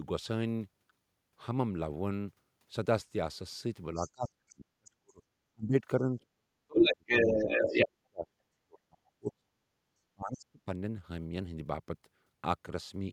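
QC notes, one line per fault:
3.94–5.22 s, 5.52–7.06 s, 7.34–8.28 s, 8.61–9.67 s, 10.14–10.69 s, speech suppressed in double talk: the speech sinks by about 40 dB (about 30 dB in the last span) in choppy pieces of up to roughly a second, likely an echo canceller ducking both voices. Packet loss would cut out without that link.
3.95–4.11 s and 6.68–7.86 s, other side's voice leaking through: a second, separate voice comes through with the speech, faint at about 20 dB down in the first instance, then about 5 dB louder than the talker. This is likely loudspeaker pickup the echo canceller missed, heard as a distinct voice rather than a delayed copy of the talker.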